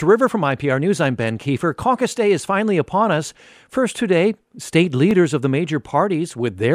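At 2.10 s and again at 5.11 s, between "today state" and "of the", the second time, overlapping chunks replay about 13 ms at each 3-second join, giving a brief stutter rather than a silent dropout.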